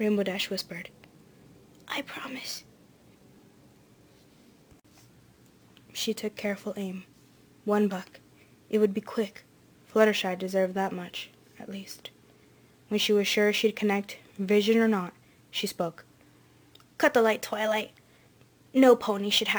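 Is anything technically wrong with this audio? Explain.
Yes, one problem runs the whole way through: imaging from sample-and-hold upsampling. The audio went from 22 kHz to 48 kHz by repeating samples unsmoothed, leaving a metallic fizz from about 11 kHz to 22 kHz, about 22 dB down.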